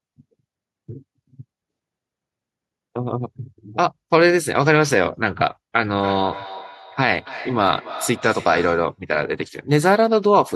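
From 5.86 s to 9.01 s the speech picks up a feedback echo between two devices: a second device in the room replays this microphone's signal, the microphone captures it again, and neither echo canceller removes audio its own device didn't play. Each word returns at a steady interval of about 300 ms, thinner and more ringing each time, peaking at about 16 dB below the speech. Room reverberation forms a smooth tail, but these repeats arrive as distinct, evenly spaced copies.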